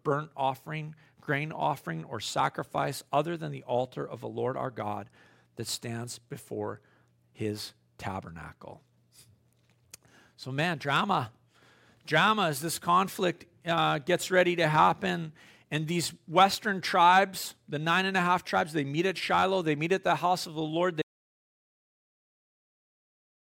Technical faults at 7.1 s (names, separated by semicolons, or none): none